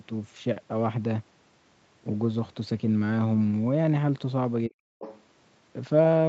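From 4.68 to 4.8 s, the echo canceller likely could not tell the talker's speech apart from loudspeaker echo while both sides were talking, so it turned the microphone signal down. This is speech suppressed in double talk: the voice collapses by a deep drop of around 40 dB for about a tenth of a second, leaving a brief hole where the talker seems to cut out before the level comes back.

From 4.99 to 5.21 s, the canceller likely failed to remove all of the far end's playback from the microphone pickup, so the other side's voice leaks through. A second voice, roughly 15 dB below the talker, sits faintly underneath for about a fifth of a second. Like the rest of the call audio, it carries nothing above 8 kHz.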